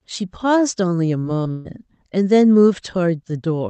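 At 1.19 s and again at 1.43 s there is short concealed packet loss. Roughly 40 ms of audio, then 20 ms, never arrived in time, and the receiver filled each hole by extending the preceding sound before crossfading back into the real signal. In this speech clip, each shows up as a brief smear or wobble rather than a clean continuation, and whatever fell inside those windows is simply not there.

From 1.51 s to 1.67 s comes a burst of packet loss. About 140 ms of consecutive audio went missing, which is too long to hide convincingly. The decoder kept extrapolating the last sound and let it decay over the gap, so the speech turns into a sustained buzz or fading hiss instead of dropping to silence. It then picks up again further along, with that stretch lost. The band limit near 8 kHz points to an Opus call path, which shapes the tone of the concealment.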